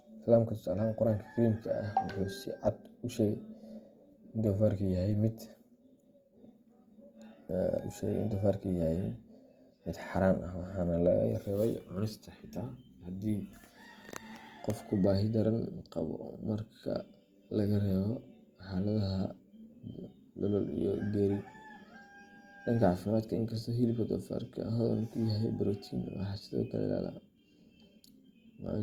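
Throughout, the speech carries plainly audible Opus compression: the band still reaches 20.2 kHz, but tones turn grainy and rough, likely from a bit-starved 24 kbps stream.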